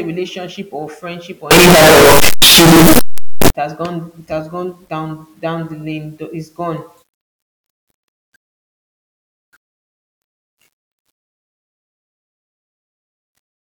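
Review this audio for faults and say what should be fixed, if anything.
Between 1.51 and 3.50 s, after "relationship or friendship or" and before "has gone it has", the speech becomes loud, harsh distortion with quiet moments as loud as the rest. The likely cause is a signed and unsigned mix-up in the 8-bit samples, which flips the top bit so every zero crossing jumps across the whole range. Declaring the 8-bit sample format explicitly as signed or unsigned at every read and write would prevent it.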